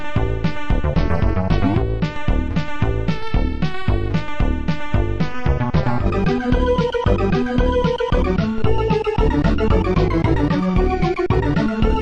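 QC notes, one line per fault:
No faults found at any point in the clip; nothing to log.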